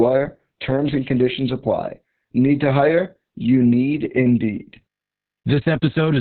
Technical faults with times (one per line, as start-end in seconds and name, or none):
0.00-6.20 Opus voice compression